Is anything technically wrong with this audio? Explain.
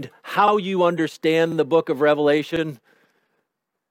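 Yes. The audio has overlapping chunks, with repeats at 0.48–0.52 s, 1.52–1.56 s and 2.56–2.61 s. It was processed in 1.0 s chunks, and each new chunk began 44 ms before the previous one ended, so that 44 ms of material plays twice at every join. The result is a brief stutter with a click-like edge, recurring at a steady interval of roughly one second.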